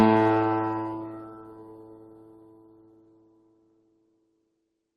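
Throughout, a noise suppressor applied to sounds treats sustained tones and tails as noise, pulling them down by about 15 dB; the waveform pumps and the spectrogram shows fading, patchy tails.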